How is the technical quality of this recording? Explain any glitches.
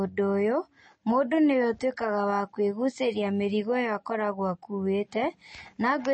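The technical quality is poor, with audible compression damage throughout. From start to finish the speech sounds watery and swirly, s sounds chirp metallically, and there is nothing above 8.3 kHz. The likely cause is MP3 compression, where a starved encoder cuts the treble and lets weak frequency lines flicker between frames. The damage fits a low bitrate around 32 kbps.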